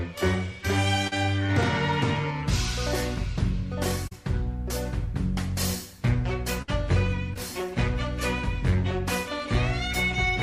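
Short concealed packet loss interrupts the audio at 1.07 s, 4.07 s and 7.34 s, where about 40 ms, 40 ms and 20 ms never arrived in time. The receiver bridged each hole by extending the preceding sound, giving a brief smear or wobble that blends straight back in. A burst of packet loss at 6.62 s is different: about 60 ms went missing in a row, and the filled-in sound is held for roughly 56 ms and turned down, so it becomes a fading buzz or hiss rather than a quick blur. The audio then resumes further on, with that stretch gone.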